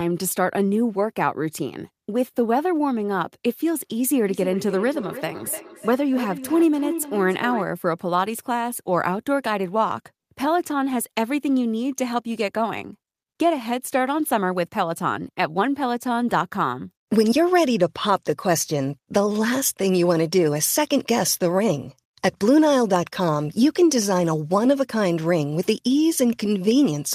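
From 4.25 to 7.7 s there's feedback echo between two devices: a second device's speaker re-enters a mic, so sound returns roughly every third of a second, about 12 dB down.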